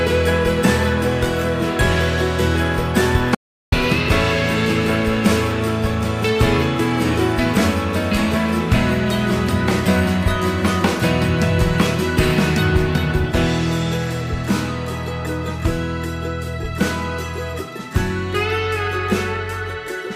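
At 3.35 s the sound cuts off abruptly in an audio dropout to silence lasting 375 ms, until 3.72 s. The gap is silent with no room tone, so anything in that span is lost. The likely cause is a brief loss of input while recording continued.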